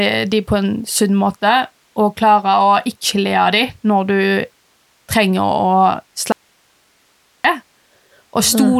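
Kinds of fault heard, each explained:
Audio dropout to a faint residue: at 6.32 s the speech cuts out abruptly, leaving only hiss about 40 dB down for roughly 1.1 s until 7.44 s. The likely cause is the wanted signal being lost while the path after the break stayed live.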